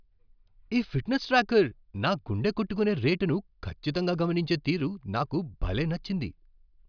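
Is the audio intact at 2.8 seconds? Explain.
Yes, at 2.8 seconds the audio is intact, with no audible fault at that point.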